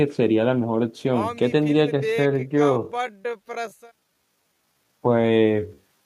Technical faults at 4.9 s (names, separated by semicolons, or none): time-stretched section